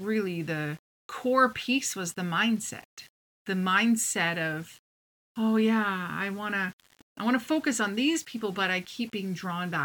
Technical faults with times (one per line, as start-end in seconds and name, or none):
0.00-9.84 low bit depth without dither